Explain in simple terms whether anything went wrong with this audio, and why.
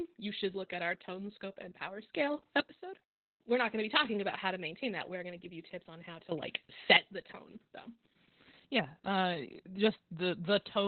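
Opus voice compression affects the whole clip. The speech was squeezed very hard by the Opus codec's voice mode, which models the voice as a simple buzz shaped by a filter and keeps only the narrow band a telephone would. Nothing is left above about 4.3 kHz, so the speech sounds muffled and dull, with a hoarse, slightly robotic edge because the fine detail of the voice was coded so coarsely.

Sudden gain jump, twice: from 2.14 to 2.60 s and from 6.32 to 6.97 s. Each time the speech and its background noise abruptly get much louder together, then drop back just as abruptly. The likely cause is a volume setting that switched instantly instead of fading, so the level steps up from one moment to the next rather than rising smoothly.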